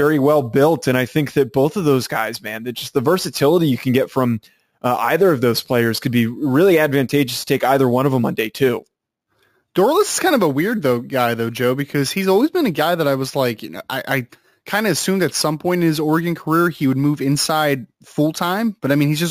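Throughout, sample-and-hold upsampling, apparently from a 16 kHz source, repeated samples unfiltered; imaging mirrors the speech into 8 to 16 kHz, about 19 dB down, as metallic fizz.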